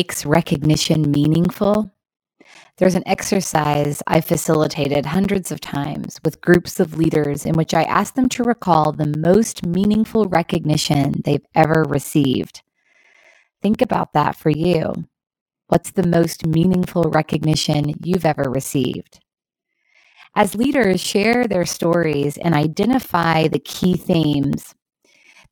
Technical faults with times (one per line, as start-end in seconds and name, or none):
0.14-25.44 periodic USB or driver dropouts